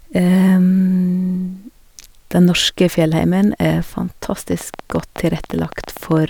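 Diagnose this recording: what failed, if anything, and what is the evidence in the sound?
A train of clicks runs through the last part of the speech, from 4.52 s to 6.18 s, at about 12 clicks per second on an irregular spacing, around twenty in all. The pulses share much the same shape and peak roughly 5 dB above the speech, so they tick through pauses as well as over the voice. The cause is likely interference from nearby equipment coupling into the analogue wiring, or a faulty connection or power supply.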